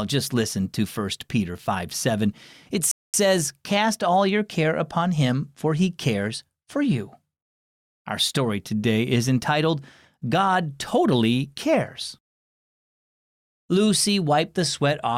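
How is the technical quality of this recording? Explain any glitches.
There's one clear glitch in the speech, a rebuffering stall from 2.91 to 3.14 s. The sound drops to dead silence for about 225 ms, then picks up exactly where it left off, with nothing skipped or repeated. That's the player draining its supply of downloaded audio and waiting for more data before carrying on. Nothing is lost, but the clip runs about a quarter-second longer, and the pause lands as an unnatural hitch.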